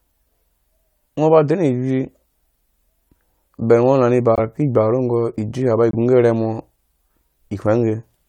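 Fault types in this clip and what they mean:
Corrupt frame muted: bit errors damaged a compressed frame so badly that the decoder rejected it, and the player substituted silence. The speech drops out abruptly at 4.35 s for about 32 ms and at 5.91 s for about 36 ms, each gap consistent with one lost frame, without disturbing the timing.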